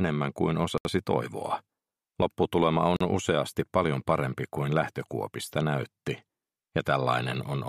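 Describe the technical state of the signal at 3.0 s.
A Bluetooth stall cuts the sound to silence from 2.96 to 3.01 s, about 41 ms. The headphones' buffer likely ran dry while delayed packets were resent.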